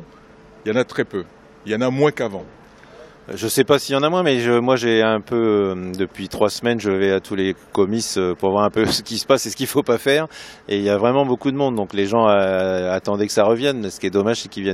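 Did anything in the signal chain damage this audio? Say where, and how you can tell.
No, nothing in the signal chain has damaged this audio. No stage, from capture through to playback, has left a mark that can be heard.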